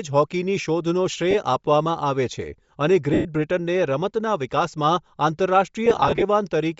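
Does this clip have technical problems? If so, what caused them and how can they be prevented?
Yes. The speech has a breathy, grainy edge and a dulled top end throughout. This likely comes from Bluetooth LC3 compression at a low bitrate, probably about 32 kbps. Use a higher LC3 bitrate or a wired path.

Lost LE Audio frames cause gaps at 1.31–1.35 s (30 ms) and 3.14–3.25 s (110 ms). From 5.86 to 6.23 s there are scattered short dropouts, mostly no longer than about 30 ms. Each time, the decoder fills the gap with a noisy smear of the last sound. Reduce distance and radio interference to prevent these dropouts.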